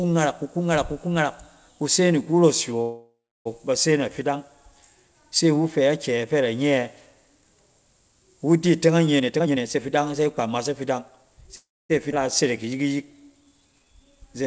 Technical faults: call audio freeze; jitter buffer speed-up; skip ahead; jitter buffer slow-down

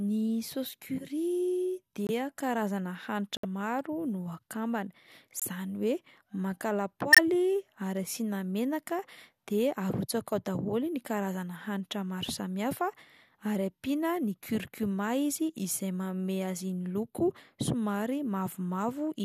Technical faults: corrupt frame muted

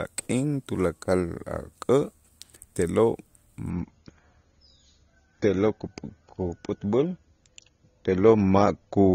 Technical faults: adaptive stream at a lower bitrate

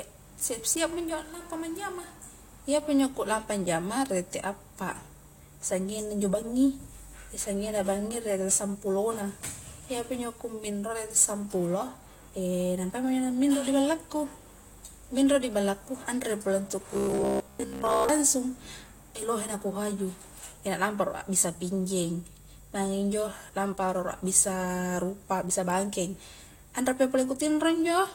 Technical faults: robotic sound from repeated short buffers

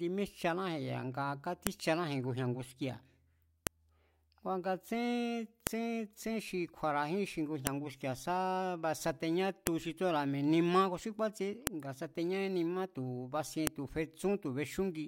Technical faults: file header played as audio

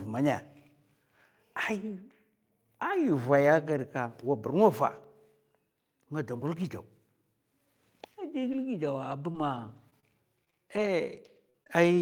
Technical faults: scattered short gaps

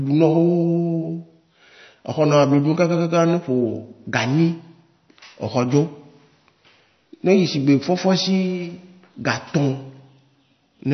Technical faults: MP3 compression

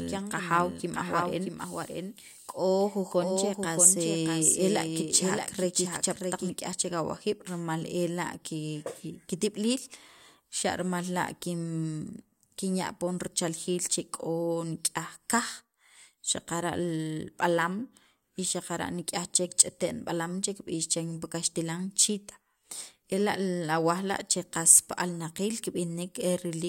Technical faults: doubled audio track

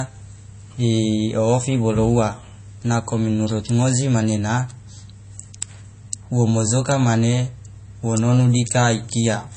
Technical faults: MP3 compression

